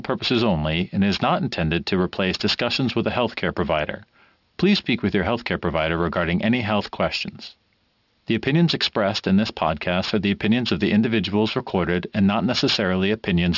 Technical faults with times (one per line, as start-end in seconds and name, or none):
0.00-13.57 aliasing